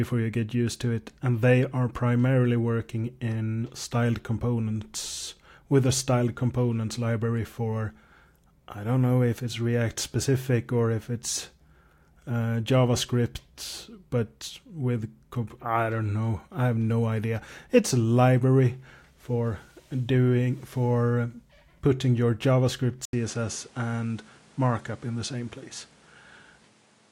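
Speech clip; at 23.05 s the sound dulls, with nothing above 11.4 kHz, a new noise floor roughly 30 dB down and an 80 ms gap, likely the input switched to a poorer device. A simple filter wouldn't add that gap or fresh noise.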